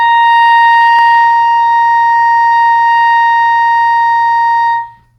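At 0.99 s a handful of samples, well under a millisecond's worth, are likely missing from the stream, a case of dropped samples. The waveform jumps straight to a later value, so no music disappears, but the join is heard as one sharp click.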